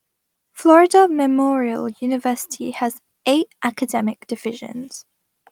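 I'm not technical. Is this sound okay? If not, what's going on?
Yes, this sound is okay, and nothing is going wrong with it.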